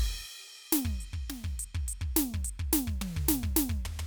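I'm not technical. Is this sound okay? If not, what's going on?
Yes, this music clip sounds fine. Nothing in it stands out as a technical problem.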